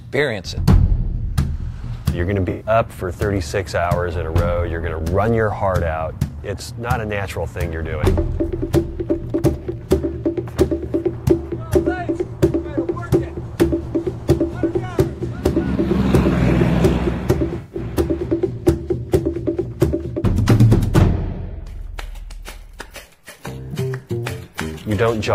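Smeared, noisy or phasey patches at 2.50–2.66 s (about 107 ms), 9.63–9.65 s (21 ms) and 17.58–17.79 s, the last spread over about 171 ms with a run of roughly 150 ms. This is AAC frame loss with concealment: the decoder patched the missing audio from the last good spectrum.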